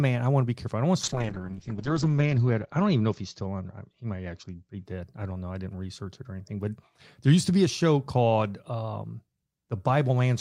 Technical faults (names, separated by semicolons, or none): call bitrate drop